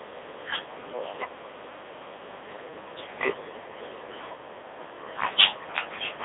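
Throughout the clip the speech has passed through the Codec 2 vocoder, which discards the waveform and transmits only pitch, voicing, energy and a coarse spectral envelope, at a rate that fits its 3.2 kbit/s mode. The decoder rebuilds the sound from sine waves inside a 300 Hz to 3.7 kHz line band, with nothing above 3.8 kHz. The damage is heavy: the voice comes out robotic and buzzy, thin and band-limited.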